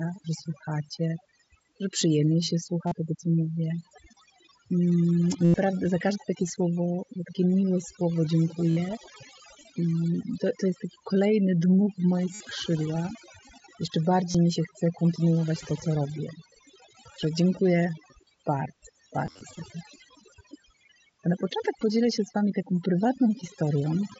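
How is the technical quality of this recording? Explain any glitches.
The recording is marred by heavy-handed noise processing and six short dropouts, all heard through the band-limited, slightly grainy sound of a Bluetooth mSBC headset link.

Overdone noise removal runs through the whole clip. The noise reducer was pushed so hard that any frequency band close to its noise estimate gets pulled down or switched off, taking quiet parts of the speech with it. The background collapses into near silence with twinkling specks.

Concealed Bluetooth headset packet loss occurs at 2.87–2.92 s, 5.45–5.54 s, 8.71–8.77 s, 12.34–12.40 s, 14.31–14.35 s and 19.26–19.41 s. At each point, packets between headset and phone went missing, and the receiver filled the gap by repeating a closely matching slice of the preceding audio. Gaps run from roughly 38 ms to nearly 100 ms, heard as a brief buzzy held tone with a slight warble as real sound resumes. 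The final event is spread over about 150 ms, with its longest run around 45 ms.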